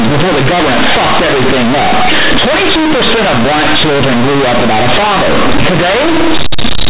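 Companded audio read as linear, throughout this speech: mu-law telephone bytes play as raw 8-bit samples without expansion, so quiet sounds blare like peaks, buzzing harshly with noisy pauses.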